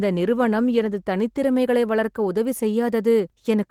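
A short bit of speech, and nothing technically wrong turns up anywhere in it.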